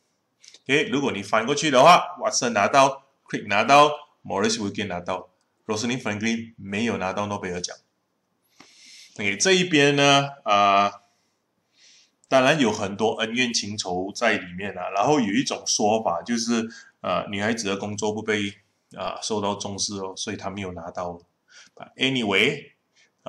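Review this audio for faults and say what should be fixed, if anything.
A DC step occurs at 19.06 s: the waveform's zero line jumps by about -33 dBFS, giving a low thump, then drains away through a 20 Hz high-pass. Unlike a dropout or digital click, the sound continues unbroken; only the baseline shifts. Prevent it by keeping converters from recalibrating mid-recording and AC-coupling or blocking offsets on any switched input.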